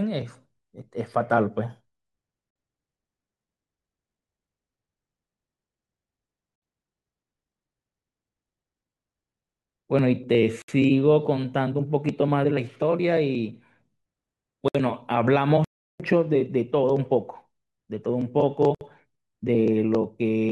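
The speech was encoded as separate pieces about every 4 s and joined without trimming, so each join keeps the encoder's start-up delay and the padding on the last frame. These gaps at the join of encoded pieces appear at 2.51 s (50 ms), then at 6.56, 10.62 and 14.68 s (each about 64 ms). Each is a short, abrupt hole in continuous speech with smeared edges, after which the speech resumes exactly where it broke off.

At 15.64 s the player stops producing output for about 0.35 s, until 16.00 s. This is a playback stall, most likely because the player ran out of buffered data or its thread was briefly blocked. The speech cuts out mid-flow for a clearly noticeable moment, far longer than the join gaps, and then carries on from the point where it stopped.

One more join gap follows at 18.75 s, again about 64 ms, keeping the same 4-second spacing as the earlier ones.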